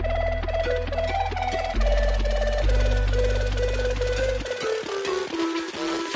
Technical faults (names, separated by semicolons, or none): none